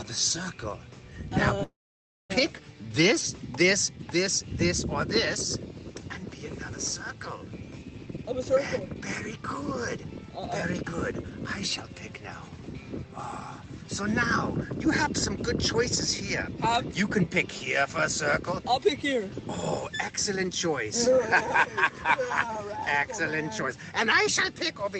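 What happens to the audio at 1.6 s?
At 1.63 s a call audio freeze begins and lasts until 2.32 s. The last sound continues briefly as a fading buzz or hiss, then goes silent for about 0.58 s. The likely cause is delayed packets emptying the jitter buffer. Playback then resumes where it stopped, so nothing is lost, but everything after it runs about 0.66 s late.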